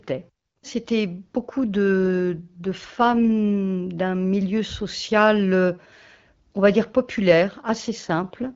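At 2.00 s the speech turns rougher and more synthetic until 3.18 s, then again from 7.81 s to the end. These are AMR rate drops, which fits the wideband codec stepping down from 12.65 to 8.85 kbit/s and spending the freed bits on protecting the link. Unlike a bandwidth fallback, the top of the band stays put, and unlike a dropout, nothing goes silent. Only the texture coarsens, then clears back to the light HD Voice coding.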